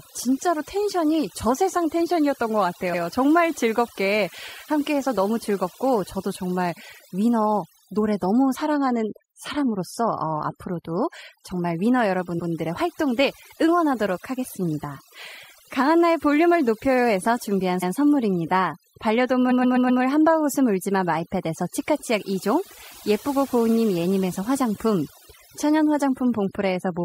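Overdone noise removal runs through the whole clip. The noise reduction was set too aggressively, so it shuts down individual frequency bands whenever they drift close to its noise estimate. Quieter parts of the speech are cut along with the noise. The background falls to near silence scattered with twinkling specks.

Repeated frames follow, where a short run of compressed frames was written or delivered more than once and the decoder plays the same slice of audio again. At 2.93 s an 85 ms block repeats once. The 12.38 s and 17.82 s repeats are each a 128 ms block, which points to six frames of about 21 ms. At 19.50 s a 128 ms block plays four extra times, adding 512 ms and ending at 20.01 s. Each is heard as a stutter that stretches the timeline.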